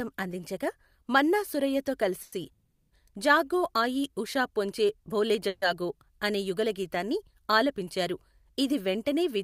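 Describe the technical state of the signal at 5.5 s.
A call audio freeze runs from 5.48 to 5.63 s, between "ఆయీ ఉషా పొంచి బోలే" and "జాగో అనే యుగళగీతాన్ని ఆలపించారు". The last sound is stretched into a fading buzz for about 140 ms, likely because delayed packets emptied the jitter buffer. The speech then resumes where it stopped, with nothing lost but a 140 ms delay added.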